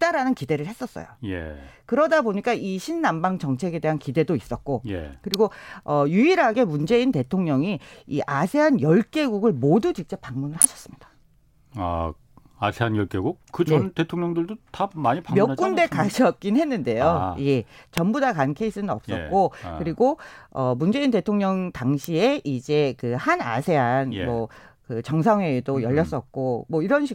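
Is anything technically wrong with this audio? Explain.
Yes. An electrical switching spike snaps through the speech at 5.34 s, 10.62 to 10.65 s, 17.98 s and 22.04 s. Each is a sharp click, likely a nearby switch or static discharge arcing into the audio line.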